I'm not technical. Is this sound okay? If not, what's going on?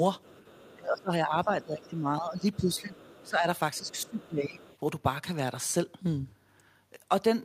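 No. Two related problems come from how the call equipment handled both people at once.

The first is the other side's voice leaking through: a second, faint voice is heard underneath, from 0.23 to 0.75 s, briefly at about 1.8 s, from 2.76 to 3.3 s, from 3.76 to 4.28 s, and from 4.58 to 4.78 s. It is likely coming from the other person's voice playing on a loudspeaker and being picked up again by the microphone. Unlike ordinary background noise, it is an actual voice, just quiet.

The second is speech suppressed in double talk: the main voice drops noticeably in loudness or breaks up from 0.75 to 2.95 s, 3.23 to 3.46 s, and 3.79 to 4.6 s. The likely reason is that the system heard both people talking together, couldn't tell them apart, and turned everything down.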